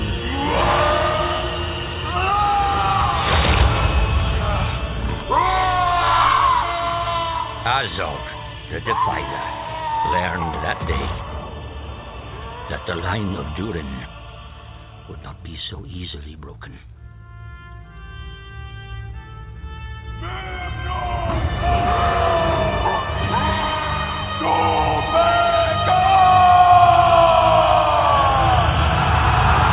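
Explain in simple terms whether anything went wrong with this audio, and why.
Nothing went wrong here; it's an ordinary call.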